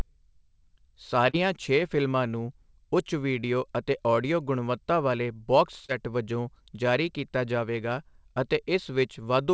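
At 1.30 to 1.35 s, just before "ਛੇ ਫਿਲਮਾਂ ਨੂੰ ਉੱਚ", and again at 5.85 to 5.90 s, before "ਵਜੋਂ ਜਾਰੀ ਕੀਤਾ ਜਾਵੇਗਾ", there is short concealed packet loss. About 40 ms of audio failed to arrive, and the receiver patched roughly 32 ms by extending the preceding sound before fading back in. Each patch is heard as a brief smear or wobble. On a spectrogram, the harmonics run flat and repetitive across the gap. The waveform shows a too-regular stretch, all against a band that stops at 8 kHz, which fits the G.722 call path.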